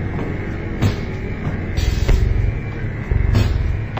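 Stereo read as mono runs throughout the audio: interleaved left and right samples play as one channel, halving speed and dropping pitch exactly 12 semitones, unlike sample-rate mismatches' odd ratios.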